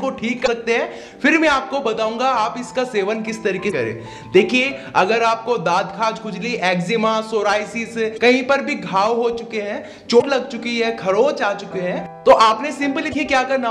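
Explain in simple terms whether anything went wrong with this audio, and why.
Damaged data in a compressed stream: parts of the compressed file were corrupted, so the decoder misread those stretches and had to find its place again. Each is heard as a brief blip, about 0.04 s long, at 0.43, 3.67, 8.14, 10.18 and 13.10 s.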